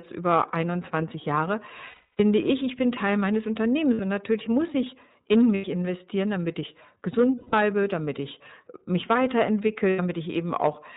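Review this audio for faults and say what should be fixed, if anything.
The entire clip was carried by the iLBC codec, a narrowband VoIP coder. The sound fits its 13.33 kbps mode, which points to 30 ms frames. The codec rebuilds each frame's excitation independently and passes nothing above 4 kHz, so the speech is band-limited throughout, with plainly audible codec damage in the form of a rough, synthetic texture. To prevent it, carry the call on a wideband codec, or at least a higher-quality path, wherever the endpoints support one.

The network dropped packets, leaving lost iLBC frames at 1.88–2.20 s (300 ms), 3.93–4.00 s (60 ms), 5.55–5.65 s (90 ms), 7.36–7.54 s (180 ms) and 9.90–10.00 s (90 ms). At each gap the decoder had no data, so it repeated the last pitch cycle blended with noise. Each hole comes out as a held vowel with a buzzy or breathy quality. Since iLBC frames stand alone, the speech recovers almost immediately once packets resume. 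To prevent it, reduce packet loss on the link, or add redundancy or forward error correction so missing frames can be recovered.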